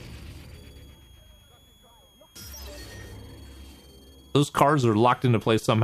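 A switching supply whistle runs from 0.54 s to the end. It is a faint high tone, roughly 35 dB down, drifting between 3.17 and 3.37 kHz.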